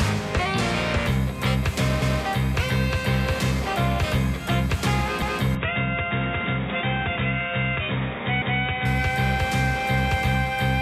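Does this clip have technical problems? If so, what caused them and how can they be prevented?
Yes. Overlapping chunks occur at 2.02, 5.22 and 8.42 s, each heard as a brief stutter where 200 ms of sound plays twice. The audio was handled in blocks of 3 s, and each new block began 200 ms before the previous one ended, so the tail of one block repeats at the head of the next, every 3.2 s. Preventing this means making each chunk start exactly where the last one stopped, or cross-fading and trimming any deliberate overlap before joining.

Input switched to a poorer device, from 5.55 to 8.85 s. In that stretch the sound turns dull and boxy because nothing above 3.8 kHz remains. The level also drops by about 5 dB, and a new background noise appears, sitting roughly 45 dB below the signal. There is no gap at the change, which points to the system likely switching mid-recording to another microphone or a headset's narrowband call profile. 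To prevent it, lock the recording to one chosen input device and disable automatic device or profile switching.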